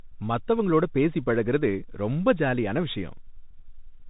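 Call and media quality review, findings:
Bluetooth CVSD headset codec, whole clip. Speech capped near 3.8 kHz, s sounds scratchy, grainy hiss under everything, loud bright bits distort. Plainly audible. Sounds like 64 kbps one-bit delta modulation whose adaptive step can't keep up with fast transients. Headset link, not mic.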